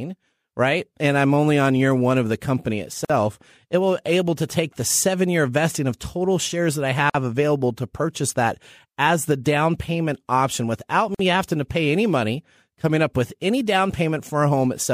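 At 3.05, 7.10 and 11.15 s, a gap at a join of encoded pieces silences the speech for 48 to 49 ms, untrimmed encoder delay and padding, showing as blank strips with smeared edges on waveform and spectrogram.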